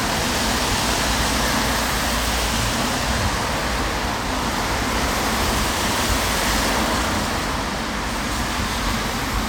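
Everyday sounds, with no technical faults to be heard.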